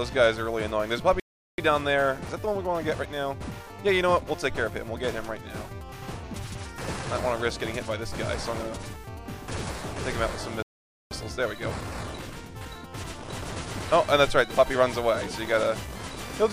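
At 1.20 s the sound cuts out abruptly. Silence lasts until 1.58 s, about 0.38 s. This playback stall likely came from the player running out of data or its thread being blocked. A second stall hits at 10.63 s and lasts until 11.11 s, nearly half a second.

After each stall comes time-compressed catch-up, from 1.58 to 4.58 s and from 11.11 to 14.11 s. The player trims its backlog by cutting and cross-fading small slices. The audio runs 1.1 times fast at normal pitch, hurried.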